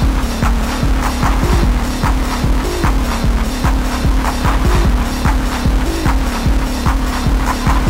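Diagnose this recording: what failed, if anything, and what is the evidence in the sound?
Nothing in the audio points to a failure at any stage along the chain, so there's nothing here to diagnose.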